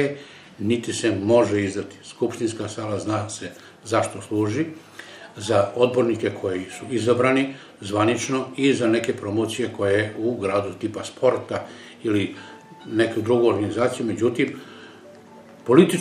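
No technical faults can be heard in this audio; the signal stays steady and intact throughout.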